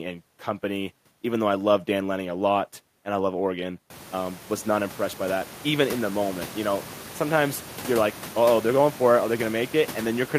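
No technical faults occur in this speech recording; the room's background noise rises by about 24 dB at around 4 s and then stays about 18 dB below the speech.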